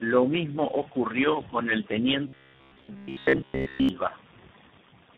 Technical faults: tandem speech coding; robotic sound from repeated short buffers

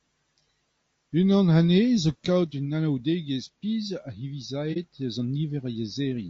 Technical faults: low-delay AAC compression; AAC frame loss with muting

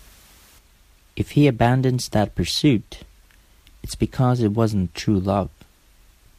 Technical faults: none

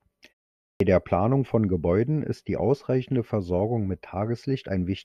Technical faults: clipped start after a pause

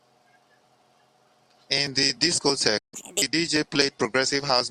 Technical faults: playback stall; catch-up at higher speed

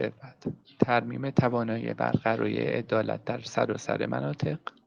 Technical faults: none

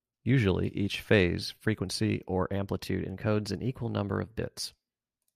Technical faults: drift correction step

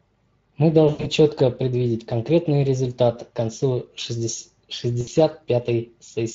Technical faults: Speex codec; VoIP packet loss concealed by the speech codec

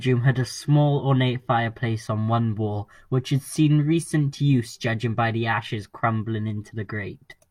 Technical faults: none

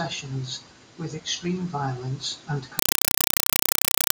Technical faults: compressed stream played as audio

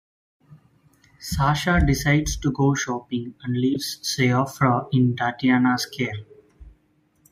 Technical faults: corrupt frame decoded

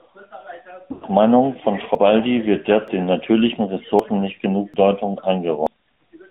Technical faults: AMR narrowband mobile codec; lost AMR speech frames; dropped buffer (overrun)

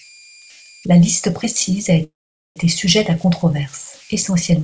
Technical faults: converter idle tones; call audio freeze

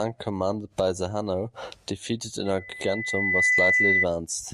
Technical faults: loudspeaker feedback squeal

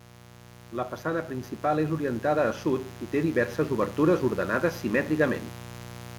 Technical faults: mains buzz; automatic gain rising

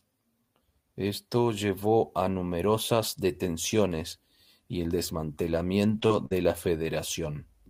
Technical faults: short concealed packet loss; lost packet rebuilt from error correction; burst of packet loss

